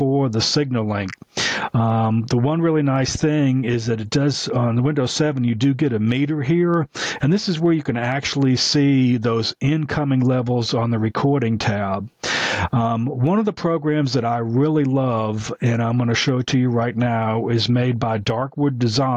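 The input gain was likely set far too high for the microphone, so a fast limiter or compressor keeps clamping down on every loud moment and then letting go. That produces gain pumping across the whole clip, with the level swinging by around 20 dB. Loud and quiet passages end up pressed close together, leaving the audio flattened.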